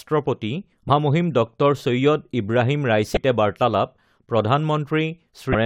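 Speech with damaged data in a compressed stream: brief glitches at 0.87–0.90 s and 3.14–3.17 s, where the decoder misreads corrupted frames.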